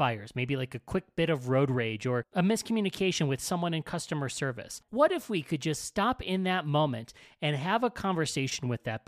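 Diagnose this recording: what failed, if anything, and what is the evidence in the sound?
Nothing failed here: the speech comes across without any dropouts, clicks, distortion or glitches to point to at any stage of the chain.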